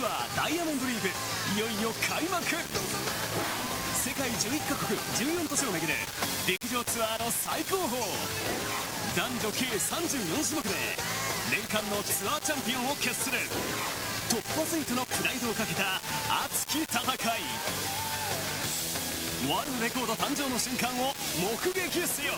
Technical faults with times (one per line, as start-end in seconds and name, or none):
0.00-22.38 low bit depth without dither